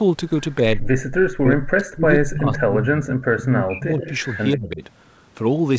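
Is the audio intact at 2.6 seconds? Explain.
No. The audio at 2.6 s falls inside a stretch of speech suppressed in double talk, running from 0.81 to 3.13 s. The speech dips sharply, by as much as about 40 dB at its deepest, and drops out in pieces for around two seconds in total. This is likely an echo canceller that heard both sides talking at once, could not tell its own talker from the loudspeaker echo, and turned everything down together.

There is also a brief echo leak from 2.55 to 2.64 s: a faint, delayed copy of the speech, arriving 136 ms late and roughly 15 dB below the direct sound. It is likely residual loudspeaker pickup that the far end's echo canceller failed to remove and sent back into the call.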